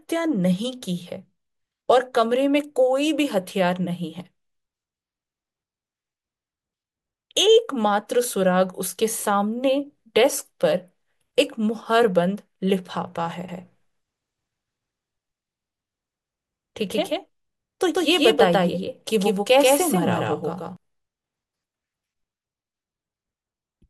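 From 13.49 to 20.77 s the speech carries a doubled audio track: a dry, equally loud copy trailing by roughly 150 ms, likely from a second capture path, starting and stopping abruptly.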